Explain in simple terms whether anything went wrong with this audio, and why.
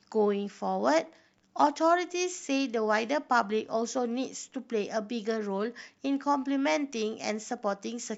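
Nothing went wrong with this speech recording, as no technical faults can be heard anywhere in it. No moment stands out as a problem, so there is nothing to explain.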